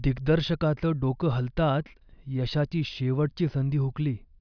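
No technical faults can be heard anywhere here.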